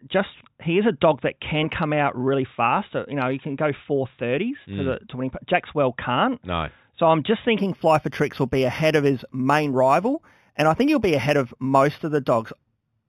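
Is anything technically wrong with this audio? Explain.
Yes. From 7.59 s, after "I'm just", to the end, there's imaging from linear upsampling: 8 kHz raised to 48 kHz by straight-line interpolation, dulling the top and leaving faint mirror images from 4 to 8 kHz, roughly 25 dB down, a light metallic shimmer on sibilants.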